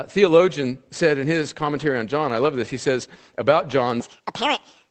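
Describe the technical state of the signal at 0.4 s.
At 0.4 s the speech is intact, carrying only the ordinary character of the Opus call path it passed through, with no fault at that moment.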